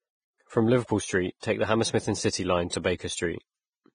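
A low-bitrate encode, likely Vorbis compression at a setting that fits roughly 20 kbps, runs through the whole speech clip. Nothing survives above 9.7 kHz, and the coarsely quantised treble turns into hiss and grain, roughening tones and smearing consonant attacks.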